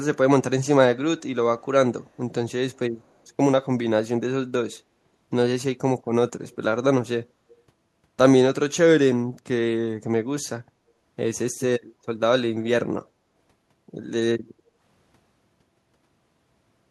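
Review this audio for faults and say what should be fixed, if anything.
Echo leak, at 3.03 to 3.12 s, 6.50 to 6.56 s and 7.49 to 7.60 s: faint, delayed copies of the speech appear about 202 ms behind the original, roughly 35 to 40 dB down, brief. This is likely a far-end loudspeaker whose sound was picked up by its own microphone and not fully cancelled, so the residue travelled back. Fixing it means better echo cancellation or a headset on the far end.

Background gated by the echo canceller, at 14.54 to 14.77 s: the room tone dips by up to about 7 dB for around a fifth of a second, then recovers. While the loudspeaker was playing, the canceller clamped the microphone to suppress echo, taking the ambient background down with it. To prevent it, use a gentler suppression setting or comfort-noise fill so the background stays steady while the far end talks.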